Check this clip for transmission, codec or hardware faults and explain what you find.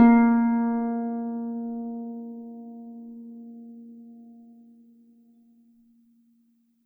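No faults detected in this music.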